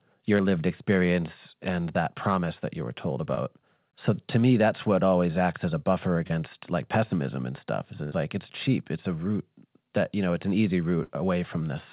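A speech recording carried over a call link, with the whole band stopping at 4 kHz, which points to G.711 mu-law narrowband coding. Three short concealed packet losses occur, at 0.38–0.41 s, 3.35–3.39 s and 6.27–6.32 s. In each, about 20 ms of audio never arrived. The receiver extended the preceding sound to cover it. The result is a brief smear or wobble. Two bursts of packet loss follow, at 8.04–8.14 s and 11.04–11.11 s. About 80 ms and 60 ms are missing. The last sound is stretched into a fading buzz or hiss. Speech then resumes further on, with a piece gone.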